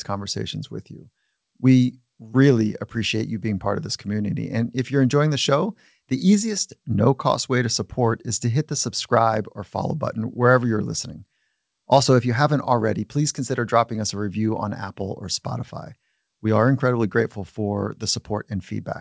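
Nothing goes wrong in this speech clip; it just comes through a call connection, with nothing above 8 kHz, which fits a wideband codec like G.722.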